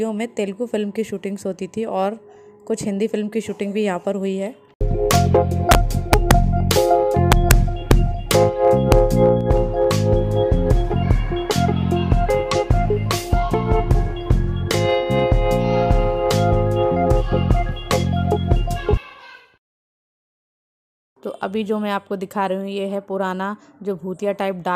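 Integer overflow cracks at 5.11–5.15, 5.71–5.75, 6.13–6.31, 6.71, 7.32–7.51, 7.91, 8.31 and 8.92 s. Peaks pushed only about 0 to 1 dB past full scale wrap to the opposite sign instead of being limited, so each one snaps across the whole range as a harsh crack, far nastier than clipping.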